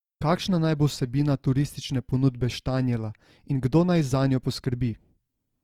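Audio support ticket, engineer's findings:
Opus compression, throughout the speech clip. Symptom: voice grainy and rough, upper harmonics noisy rather than clean, damage plainly audible. Likely cause: Opus encoder in CELT music mode at a low rate, consistent with roughly 24 kbps. Mechanism: band energies kept, fine detail replaced by folded or noise fill. Spectrogram: full bandwidth retained, few holes, but upper bands smeared and hazy, harmonic striations blurred into noise above the lower range.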